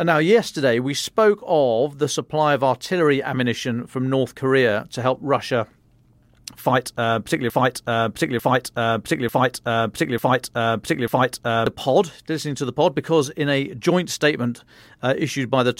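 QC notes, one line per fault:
7.50–11.67 s: broken-record loop after "fight uh particularly"; a 0.89 s fragment repeats five times back to back, likely a stalled stream, so the intended audio is lost.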